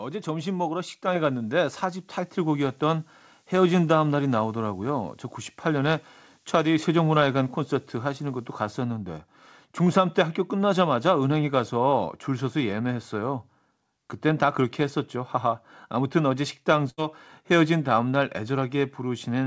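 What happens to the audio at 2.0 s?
At 2.0 s the speech sits over a switching supply whistle, which runs from 0.75 s to 8.75 s. A switching power supply is either running in an audible burst mode or beating with another supply, so its switching rate falls into hearing range as a thin, high whistle, roughly 25 dB below the speech. Unlike a fixed test tone or steady mains hum, its pitch wanders, moving between about 11.9 kHz and 12.4 kHz as the load shifts.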